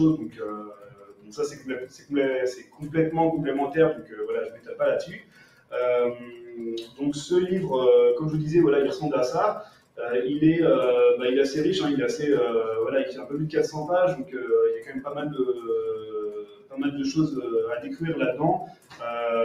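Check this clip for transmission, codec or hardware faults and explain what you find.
A processing fault runs through the whole clip: a noise suppressor built for speech has been left on non-speech audio, and it repeatedly clamps down on parts of the sound.

Noise suppressor applied to music or sounds, throughout. The suppressor's gain tracking treats sustained, stable content and decaying ambience as background noise. It pulls those parts down while letting transients pass. Its gain swings by roughly 15 dB over the clip, so held material and tails sink and recover, giving a pumping, fluttering, thinned-out character.

Sound cut by the noise suppressor, at 0.29–2.83 s, 3.94–7.01 s, 9.65–9.99 s, 13.12–13.33 s, 14.21–16.78 s and 18.62–19.03 s. At each point the suppressor judged the ongoing sound to be noise and attenuated it harder than its surroundings. The deepest cuts are about 15 dB at the first three, about 10 dB at 13.12 s, about 16 dB at 14.21 s and about 14 dB at 18.62 s. 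Sustained or fading portions drop away or have their decay chopped short, while sharp onsets survive. The longer stretches lose well over a second of level each.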